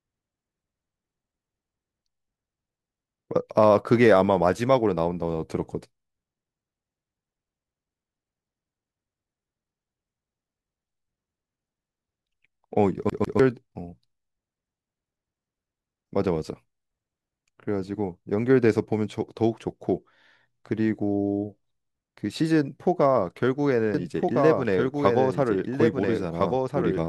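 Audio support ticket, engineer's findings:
Stutter at 13.10–13.39 s: the same 0.15 s fragment repeats twice with brief mutes at each jump. CD stuck on one turn, scratch throwing the laser back a track.

From 23.94 s to end: abrupt second copy trailing about one and a half seconds behind, about 5 dB quieter, dry. Doubled audio track, likely a slower second capture path.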